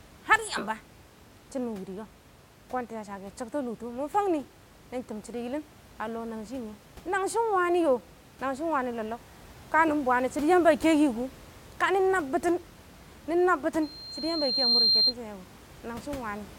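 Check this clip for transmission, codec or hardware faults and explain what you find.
There's one real problem here: loudspeaker feedback squeal from 13.82 to 15.14 s. The mic is catching its own loudspeaker, so a 4.2 kHz tone runs away, building over about a second to a piercing squeal that ends up a few dB louder than the speech.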